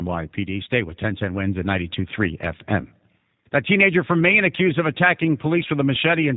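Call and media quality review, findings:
G.729 codec across the whole clip: speech rebuilt from a vocal tract filter, pitch predictor and sparse pulses per 10 ms frame, which fits 8 kbit/s G.729A. Nothing above 4 kHz; speech plainly rough, buzzy and synthetic throughout.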